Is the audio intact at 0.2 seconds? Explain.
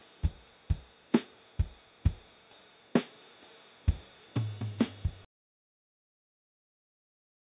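Yes, at 0.2 s the audio plays through intact, with no dropout, click, distortion or other fault audible at that moment.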